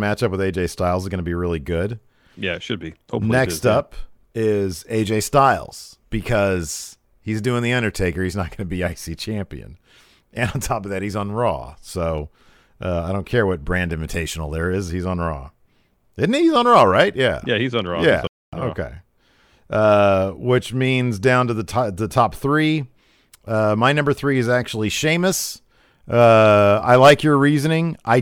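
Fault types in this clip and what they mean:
Playback stall: the speech cuts to silence for about a quarter second at 18.27 s, then resumes, likely the player starving for data or getting blocked.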